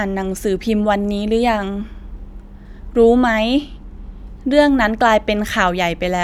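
Channel delay (comb filtering) from 3.18 to 4.18 s: one channel lags by about one sample, so the mono sum notches out the top end near 20 kHz, slightly dulling the speech.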